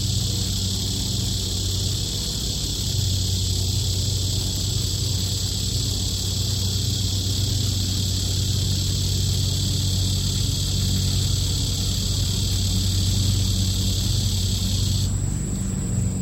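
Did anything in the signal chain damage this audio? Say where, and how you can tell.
No, nothing in the signal chain damaged this audio.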